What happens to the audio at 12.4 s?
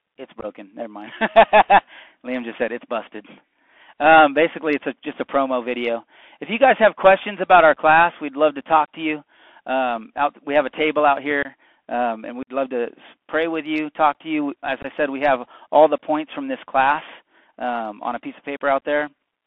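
Just after "um and", from 12.43 to 12.50 s, the sound breaks into short hard-edged gaps totalling about 45 ms: unconcealed Bluetooth headset packet loss, with around ten tiny voice packets dropped and replaced by silence or an idle pattern. Unlike concealed loss, nothing is smoothed or repeated; the holes chop before "love to pray with", and the narrowband CVSD audio resumes briefly quieter.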